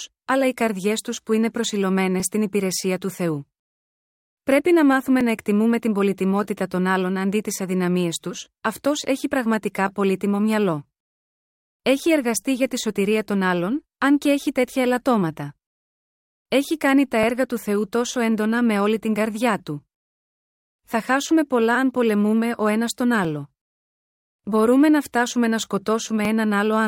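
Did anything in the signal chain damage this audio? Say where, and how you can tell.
Yes. Overlapping chunks at the buffering stage cause short clicks at 5.21, 8.21 and 26.25 s, which fits a 3-second chunk size. Each new block starts 6.5 ms early and replays that sliver. On a waveform this shows as a duplicated fragment with a step discontinuity, and on a spectrogram as thin vertical broadband lines.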